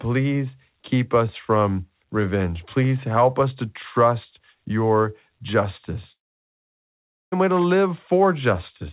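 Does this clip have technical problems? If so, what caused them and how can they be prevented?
Yes. Between 6.12 and 7.34 s a long network dropout likely cut off the incoming packets for about 1.2 s. The receiver briefly carried the last sound forward as a fading buzz, then dropped to near silence, and the speech resumes with that stretch missing. A steadier network link, combined with redundancy or forward error correction in the call, would let lost packets be recovered before they leave a gap.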